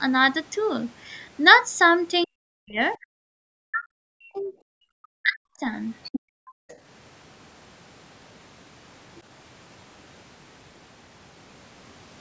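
From 2.25 to 2.8 s, 3.01 to 4.53 s and 4.75 to 5.68 s the talker's speech sinks by about 40 dB, likely speech suppressed in double talk as the canceller ducked both voices; the waveform shows collapsed envelopes. At 6.04 to 6.2 s a second voice, likely the other side's voice leaking through, sits about 10 dB under the speech, appearing as extra harmonics below the 8 kHz ceiling. From 6.2 to 6.68 s the background gated by the echo canceller drops about 40 dB, a near-silent gap on the waveform. At 6.68 to 6.78 s a brief scrap of the other side's voice leaks through again, about 30 dB down, likely residual echo.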